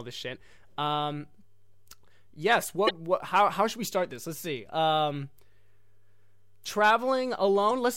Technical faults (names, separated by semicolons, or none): damaged data in a compressed stream